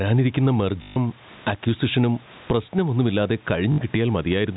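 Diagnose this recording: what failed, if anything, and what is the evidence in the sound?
The input stage is the likely culprit: microphone gain set far too high, with a fast limiter or compressor in the call processing reining it back on every loud syllable. Throughout the speech the gain swings by around 15 dB. That constant riding of the gain is gain pumping, and it leaves the speech squashed, with loud and quiet passages pressed close together.

At the network stage, packets went missing and the receiver filled the gaps by replaying the last packet it had. This is packet loss with the last packet repeated. The first run spans 0.82 to 0.96 s (140 ms), and the second spans 3.72 to 3.78 s (60 ms). The lengths fit 20 ms packets. The looped segments repeat at the packet rate, so the run buzzes at about 50 Hz, a brief robotic stutter.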